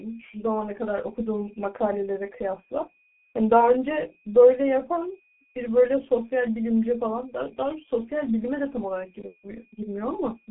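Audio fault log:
throughout: switching supply whistle. A thin, slightly wandering line between 2.44 and 2.50 kHz sits roughly 30 dB below the speech, heard as a faint high whine from an audible converter.
throughout: G.723.1 codec. The spectrogram shows a hard ceiling near 3.8 kHz and smeared formants, consistent with a 6.3 kbit/s mode. The result is muffled, hoarse speech with blurred consonants.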